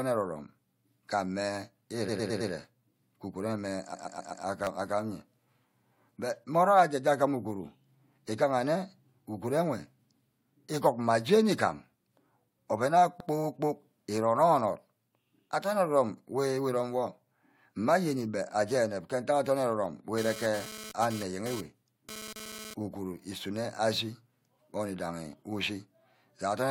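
At 2.08 to 2.50 s, and again at 3.93 to 4.45 s, repeated frames occur: a run of compressed speech is decoded over and over. A 107 ms block plays four extra times, then a 128 ms block does the same. Each sounds like a stutter and lengthens the audio by about 0.43 s and 0.51 s.

At 4.64 to 4.67 s, a repeated buffer occurs. Fresh audio arrives late, so playback loops a tiny slice three extra times, which fits a 10 ms buffer. It is heard as a brief click-buzz, and about 30 ms of speech is lost.

At 13.19 to 13.28 s, just after "oven ayo", an 85 ms block of frames plays once more, giving a quick hiccup.

From 20.18 to 22.74 s, there is GSM phone buzz. A nearby phone in a data transfer sends radio bursts at 217 Hz that the audio circuit picks up and rectifies. This adds a raspy, harmonic-rich buzz at about 13 dB below the speech that comes and goes.

Within it, at 22.47 to 22.60 s, just before "uguru isunor", a 64 ms block of repeated frames plays twice more, adding a 128 ms stutter.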